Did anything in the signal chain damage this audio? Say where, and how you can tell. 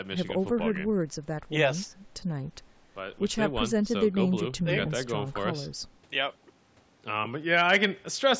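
No, nothing in the signal chain damaged this audio; it went through a call's microphone processing, which is normal here.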